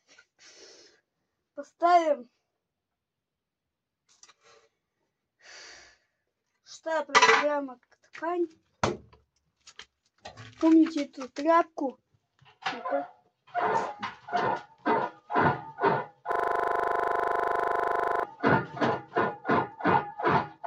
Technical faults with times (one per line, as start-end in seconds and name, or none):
16.32-18.23 system hang loop